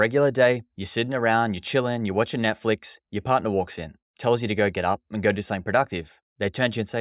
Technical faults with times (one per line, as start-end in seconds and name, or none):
none